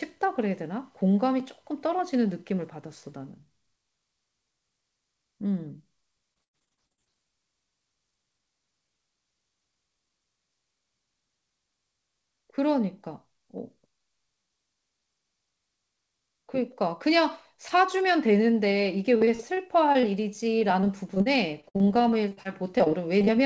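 Speech carried over a call link, with nothing above 8 kHz, which fits a wideband codec such as G.722, shows repeated packet loss (robotic sound) at 6.34–7.15 s, 19.17–20.05 s and 20.59–23.29 s. Lost packets are patched by stretching the preceding sound, so the speech turns choppy, with pieces missing. In the first burst, gaps of up to 95 ms leave about 41% of the stretch concealed. On a spectrogram, this appears as smeared, repeated harmonic slices and abrupt vertical breaks.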